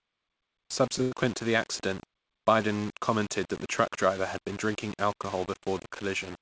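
Speech clip in which the samples were likely rounded to very few bits without dither, fitting about 6 bits, so grainy distortion about 20 dB below the speech tracks every sound and quiet stretches turn gritty. At 1.02 to 1.14 s, just before "to the accident", a short stall from a late packet emptied the jitter buffer, so the last sound is stretched for about 94 ms before continuing where it left off, with nothing lost. The call codec path keeps the audio band-limited with nothing above 8 kHz.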